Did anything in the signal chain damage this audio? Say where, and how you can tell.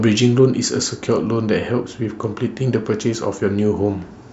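Yes, at playback from the disc. A scratch destroyed more data than error correction could rebuild on each revolution, so the player interpolated or muted those samples. This gives CD scratch ticks: three brief clicks from 2.70 to 3.15 s, each lasting well under a millisecond.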